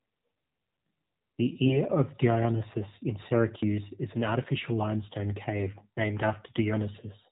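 Speech comes through an AMR narrowband mobile codec for the whole clip. Nothing above 4 kHz survives, and the voice sounds plainly buzzy and synthetic. That fits a low mode around 7.4 kbps, where few pulses drive the vocal-tract model. AMR bit errors strike twice, from 1.64 to 1.78 s and from 5.75 to 5.88 s. Pitch and level hold roughly steady, but the voice turns hoarse and gargly. Flipped, weakly protected bits misplace the excitation pulses and skew gain and spectrum values. The rate fits a few percent of bits.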